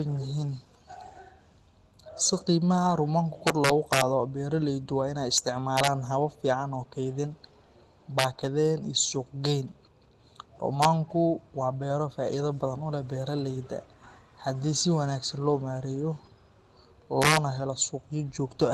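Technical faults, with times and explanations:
3.47–4.01 s, 5.38 s, 5.77–5.87 s, 8.19–8.24 s, 10.82–10.85 s and 17.22–17.37 s, integer overflow: loud peaks pushed the level about 0 to 4 dB past the integer limit, and instead of clamping, the samples wrapped to the opposite sign, so you get harsh cracks far nastier than ordinary clipping.
9.45 s, lost packet rebuilt from error correction: one 20 ms packet went missing, but the next one carried a low-bitrate backup copy that Opus decoded in its place. There's no gap, just a brief rougher, noisier patch over the Opus call path's normal coding noise.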